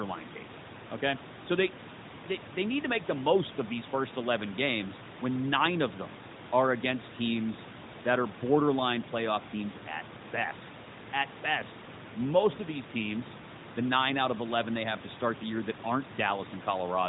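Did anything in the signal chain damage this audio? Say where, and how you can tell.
No, nothing in the chain damaged this speech: the room noise sits about 17 dB below the voice as part of the original recording, and the AMR narrowband mobile codec at 12.2 kbps limits the band to below 4 kHz and leaves only light coding texture, with no dropouts, clipping or other breaks.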